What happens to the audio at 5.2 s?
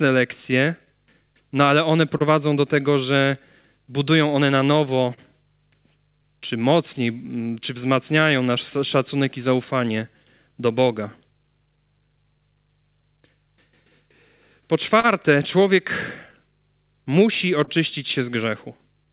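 Right around there, from 5.14 to 5.19 s, there's a short stall from a late packet. The jitter buffer ran dry, so the last sound got stretched for 35 ms until the packet showed up, and then playback picked up where it left off. Nothing's lost, but that bit hangs a touch too long, with a faint buzzy dip.

It also sits on top of clock drift between sender and receiver. The sender's clock runs about 3% slow, so the buffer keeps drifting toward empty.

That drift drives repeated timing corrections from 0.03 to 19.06 s. The receiver keeps padding short pieces at 98% speed, adding roughly 0.4 s overall, with the edits unevenly spaced.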